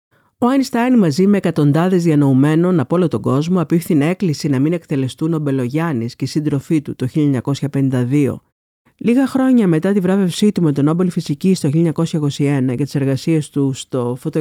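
On listening, nothing in this recording stood out as a technical fault.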